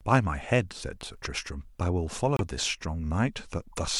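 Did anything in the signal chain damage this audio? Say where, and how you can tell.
Yes. The damage is in the codec stage: a corrupt frame decoded, twice. At 2.36 to 2.41 s a brief glitch cuts across the speech, peaking at about -15 dBFS. A second, much fainter glitch sits at 3.73 to 3.77 s, near -35 dBFS. Each lasts under 50 ms. That fits one damaged frame, then a few. Flipped bits corrupted the gains and codes. The decoder still played them, putting energy at the wrong frequencies.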